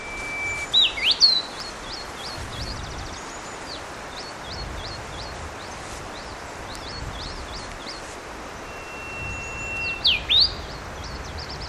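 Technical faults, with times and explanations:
Nothing stood out as a technical problem on listening.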